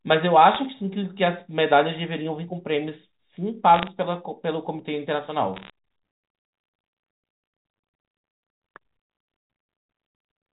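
Bit errors on the digital G.711 phone line flip individual samples, adding bursts of sharp ticking crackle over the speech at 0.55–0.60 s, 3.74–3.87 s and 5.54–5.70 s.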